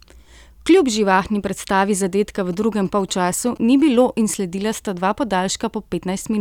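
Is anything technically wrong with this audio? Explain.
Yes. A nearby 2G phone exchanging signalling with its network leaks into the audio path from 2.53 to 3.96 s, between "živahni predstavi zadetka v" and "in sledila sta dva": GSM signalling bursts. The circuit rectifies the phone's pulsed radio transmissions, which repeat at about 217 Hz, and turns their envelope into audible sound. The result is a galloping dit-dit-dit pattern of short buzzes sitting well below the speech, roughly 25 dB down.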